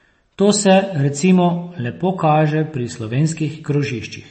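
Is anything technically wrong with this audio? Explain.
Yes. Throughout the speech, nothing is present above 8.3 kHz, and the sound is plainly watery and swirly. This is likely MP3 compression at a low bitrate, around 32 kbps. Starved of bits, the encoder cuts the treble and drops weak frequency lines frame by frame. That flickering swirl is what sets it apart from a plain low-pass filter.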